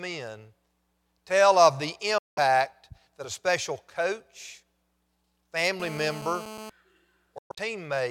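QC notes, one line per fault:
2.18–2.39 s and 7.38–7.59 s, Bluetooth dropout: the first is one clean hole of about 186 ms. The second is choppier, about 139 ms lost in gaps scattered over roughly 186 ms with the longest about 116 ms. Speech resumes further along each time, as if it kept running, likely from packets arriving too late for the headphones.
5.80–6.70 s, GSM phone buzz: a hard, raspy 217 Hz buzz, thick with harmonics and sitting about 15 dB under the speech. It holds steady, which fits a nearby 2G phone on a call whose burst pulses get rectified in the audio circuitry.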